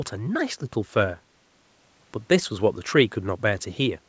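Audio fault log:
No faults heard in this speech clip.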